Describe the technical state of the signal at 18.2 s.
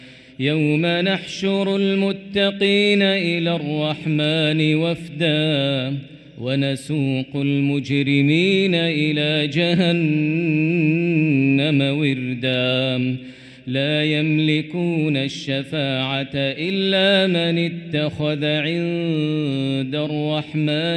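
At 18.2 s the signal is intact, with no fault present at that moment.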